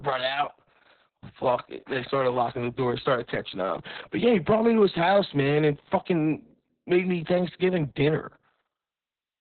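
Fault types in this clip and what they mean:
Opus voice compression: The speech sounds muffled, hoarse and slightly robotic. The spectrogram shows nothing above 4.3 kHz, which fits narrowband SILK coding at roughly 6 kbps.
Hard clipping: From 1.46 to 1.53 s, peaks exceed the level limit by about 3 dB. The waveform tops are cut flat, and a brief crackle smears energy upward.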